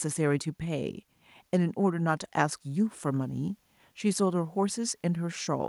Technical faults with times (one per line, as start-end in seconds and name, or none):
none